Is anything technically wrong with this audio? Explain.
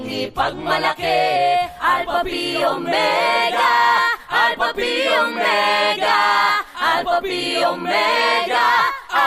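Yes, there's DAB burbling, at 5.45 to 5.47 s and again at 8.10 to 8.24 s. Weak reception lets a small share of bit errors slip past error correction, so wrong samples put short blips of noise in single sub-bands and wrong scale factors make some sub-band levels jump for up to a frame, the second burst spanning several frames.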